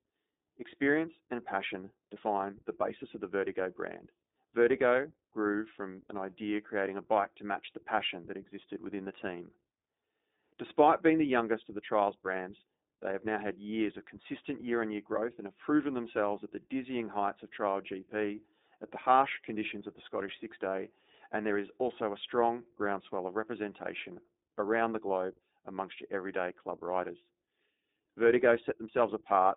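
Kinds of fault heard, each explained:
iLBC codec: This is a narrowband VoIP codec that codes each short frame's excitation on its own, without leaning on the previous frame. Here the speech sits in a phone-style band of roughly 300 Hz to 3.7 kHz with nothing above 3.8 kHz, so it sounds boxy and muffled. The codec damage is plainly audible as a rough, slightly synthetic texture throughout, which fits the 20 ms frame, 15.2 kbps mode.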